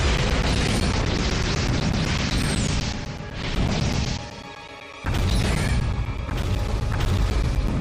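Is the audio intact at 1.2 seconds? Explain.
No. 1.2 s falls within periodic USB or driver dropouts running from 0.17 to 7.68 s. Every 0.125 s the audio path stalls and around 10 ms is replaced by silence, giving a regular tick eight times per second wherever signal is present.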